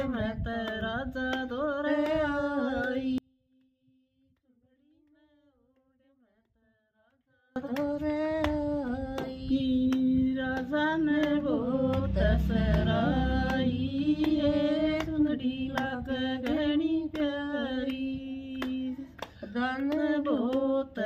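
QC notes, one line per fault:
3.18–7.56 s, audio dropout to a faint residue: the sound cuts off abruptly for about 4.4 s, leaving only a faint leak roughly 35 dB below normal, then snaps back; likely the signal feed broke while the downstream path stayed live.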